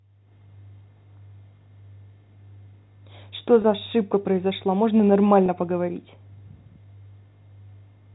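A speech recording passed through G.711 telephone coding, so the spectrogram shows nothing above 4 kHz. It has packet loss with pitch repetition at 3.62 s and 5.46 s: each 20 ms gap is bridged by a repeated pitch period, heard as a brief buzzy hold and seen as identical repeating cycles in the waveform.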